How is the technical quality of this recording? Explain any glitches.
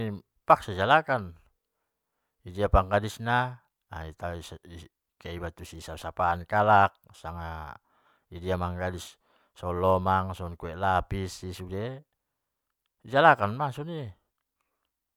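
No glitches can be heard in this speech recording. There is no point where the audio breaks, jumps or distorts in a way that needs explaining.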